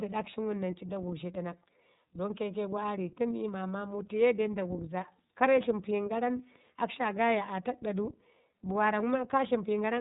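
From start to finish the speech carries iLBC codec damage, and it is plainly audible. Nothing above about 3.8 kHz survives, so the sound is narrowband and muffled. Each frame's excitation is coded on its own, without reference to the previous one. That leaves the speech clear but rough and slightly synthetic. The texture fits 30 ms frames at around 13.3 kbps. Sibilants and breath lose their brightness.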